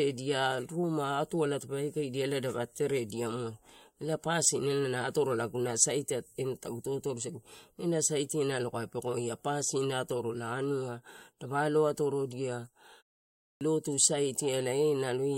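At 13.33 s, after a pause of 0.39 s, the speech resumes with a clipped start after a pause: the output path had gone idle and took 0.28 s to wake, swallowing the opening sounds so the speech bursts abruptly out of silence. Unlike muted pauses, actual speech is lost here.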